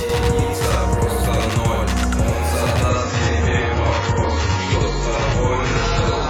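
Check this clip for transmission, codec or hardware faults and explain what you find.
Two faults stand out: a constant doubling and a sudden quality drop from 2.9 s to the end.

Channel delay (doubling), throughout: one channel arrives about 93 ms late, which fits a 4096-sample buffer. Summed to mono, the late copy sounds like a slap echo at equal level.

Adaptive stream at a lower bitrate, from 2.89 s to the end: the stream switched abruptly, without a gap, to a much lower-bitrate version. Codec artefacts increase and nothing remains above 7.7 kHz.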